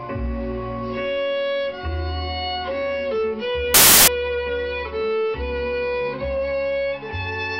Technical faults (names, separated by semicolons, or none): samples built from the wrong bytes